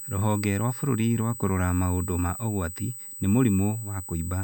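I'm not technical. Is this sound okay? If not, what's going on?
No, there's a USB whine running the whole way through: a steady, high-pitched tone at 8 kHz and 16 kHz, where power noise from a USB connection leaked into the audio.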